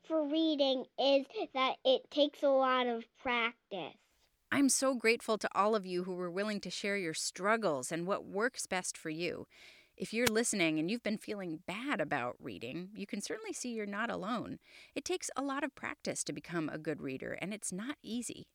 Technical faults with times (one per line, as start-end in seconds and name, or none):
10.24-10.30 wireless microphone noise hit